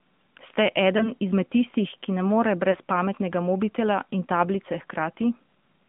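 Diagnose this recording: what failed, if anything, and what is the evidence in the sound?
AMR narrowband mobile codec, throughout the clip: this is codec-stage damage. The speech is confined to a band of roughly 150 Hz to 3.5 kHz, with nothing above it, and carries a plainly audible buzzy, synthetic edge. The codec rebuilds the voice from a vocal-tract model excited by a few pulses per subframe. The degree of coarseness points to a mid-range mode around 10.2 kbps, where that pulse model audibly simplifies the waveform.

Lost AMR speech frames at 0.98 to 1.12 s and 2.72 to 2.77 s: this is a network-stage fault, heard as brief dips or warbles in the speech. Each disturbance is short and fits a single lost 20 ms frame. When a frame failed its checksum on the radio link, the decoder filled the gap by repeating the last good pitch and vocal-tract settings at reduced gain. The speech then resumed weak or rough for a moment.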